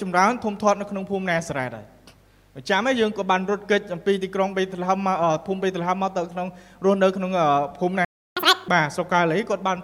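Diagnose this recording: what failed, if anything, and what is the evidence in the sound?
Playback stage: at 8.05 s the sound cuts out for about 0.32 s, a playback stall, likely the player running dry or its thread getting blocked.

Then from 8.37 to 8.68 s there's catch-up at higher speed: audio runs at 2x, pitch up around ten semitones, while the player burns through its backlog.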